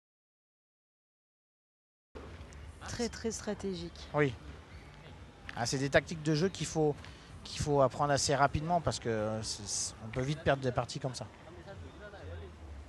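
An audio dropout to silence runs from the very start of the clip to 2.15 s. The opening is silence, with no room tone or noise floor beneath it, and the sound arrives abruptly at 2.15 s, already in progress rather than building up naturally. The likely cause is a lost input, such as a disconnected device, a broken link or an accidental mute, while the recorder kept writing empty samples. Whatever preceded 2.15 s is gone.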